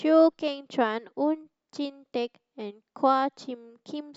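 No technical faults can be heard anywhere in this speech recording.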